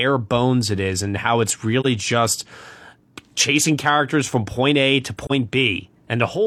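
At 1.80 s and again at 5.25 s the speech drops out for about 60 ms, consistent with AAC frame loss with muting. Each gap fits a single lost frame whose spectrum the decoder zeroed, so the overlapping windows fade the sound out and back in.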